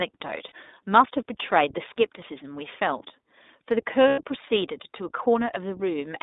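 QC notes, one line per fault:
throughout: iLBC codec. The sound is narrow, slightly rough and synthetic, with nothing below 250 Hz or above 3.7 kHz. Each 20 ms frame's excitation is coded independently, which fits the 15.2 kbps mode.
0.48–0.52 s: lost iLBC frames. A brief buzzy held vowel replaces about 40 ms of audio, which fits two lost frames. The decoder repeated the last pitch cycle with noise, and the sound recovered immediately.
4.08–4.21 s: lost iLBC frames. A longer held, breathy buzz fades over about 100 ms, which fits five lost frames. The concealment repeated the last pitch cycle and let it decay before clean frames resumed.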